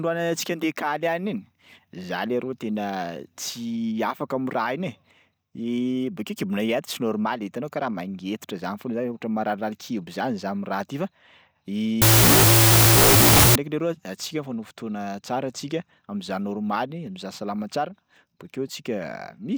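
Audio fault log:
12.02–13.55 s, wrong sample width: 16-bit data read as unsigned 8-bit, giving loud noise over buried speech at half speed and lower pitch, before "leroa antsika mifanao fotoana".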